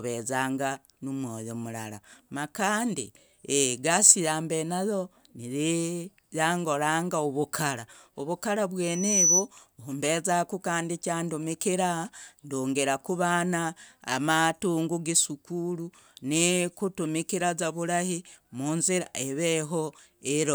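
A piercing 5.9 kHz whistle swells over 8.83 to 9.49 s, reaching around 10 dB above the speech. This is loudspeaker feedback squeal: the microphone re-amplified its own loudspeaker until that frequency ran away.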